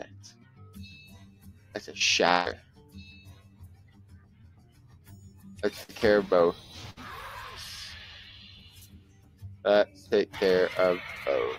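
A noise suppressor applied to music or sounds runs throughout, treating sustained tones and tails as noise, so level swings by around 20 dB and the sound pumps and thins.

Sound cut by the noise suppressor first appears at 0.32 to 0.61 s and 1.26 to 1.74 s, with held material sinking by about 7 dB while attacks pass.

A burst of packet loss at 2.31 to 2.48 s drops about 140 ms. The receiver stretches the last sound into a fading buzz or hiss, then resumes further on.

Suppressor cuts follow at 2.60 to 2.95 s, about 7 dB, and at 3.29 to 5.44 s, about 8 dB.

Inside that stretch, short concealed packet loss at 4.42 to 4.45 s loses 20 ms. It is patched by continuing the prior sound and heard as a brief smear or wobble.

Further packet-loss bursts at 5.83 to 5.90 s and 6.90 to 6.99 s each lose 60 ms, filled with a decaying continuation before the audio jumps ahead.

Suppressor cuts return at 8.65 to 9.64 s, about 8 dB, and 9.86 to 10.11 s, about 6 dB, shortening decays.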